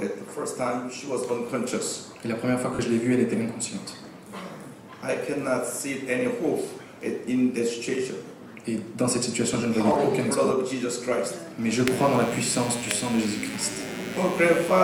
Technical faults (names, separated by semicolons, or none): lost LE Audio frames; computer activity noise